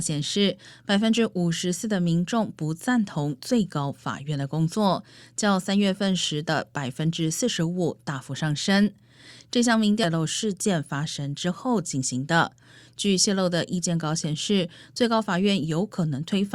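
A stream segment skipped at about 10.03 to 10.07 s: the speech jumps abruptly forward with a brief blip, as though part of the programme is missing. The likely cause is one segment of the segmented stream failing to load, with playback carrying on from the next.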